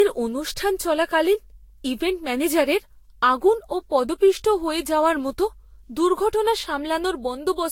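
From start to finish the speech sounds swirly, hollow and smeared, consonant attacks blur, and nothing reaches above 16.6 kHz. That's likely generation loss, around five lossy passes, consistent with Vorbis near 62 kbit/s, each requantising on a shifted frame grid so damage stacks.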